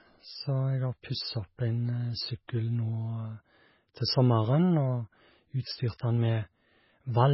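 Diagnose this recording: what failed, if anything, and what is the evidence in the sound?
The codec stage is the likely failure: heavy MP3 compression runs through the whole speech clip. Nothing remains above 5.6 kHz, and starved frequency lines flicker between frames, giving a watery, swirly texture, chirpy sibilants and smeared onsets, which fits a very low bitrate around 16 kbps.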